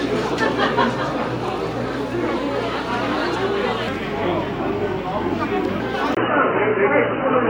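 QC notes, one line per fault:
3.88–5.80 s, section at the wrong speed: the everyday sounds here play at 0.816 times their proper rate, so everything drags and drops about four semitones, with pitch and tempo falling together. The likely cause is the section being fitted to the wrong clock. On a spectrogram, harmonics and resonances sit visibly lower than in the surrounding audio and each event is stretched wider. The waveform shows transients spaced further apart.
6.15 s to end, input switched to a poorer device: a 20 ms dropout marks the change, after which the band narrows, the sound turns dull and boxy, a new background noise appears around 35 dB below the signal, and the level shifts by roughly 5 dB. This most likely reflects a different, narrower-band input taking over. A spectrogram shows a thin blank column at the switch and then a lower high-frequency ceiling over a raised noise floor. 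The waveform shows a brief flat line and a step in amplitude.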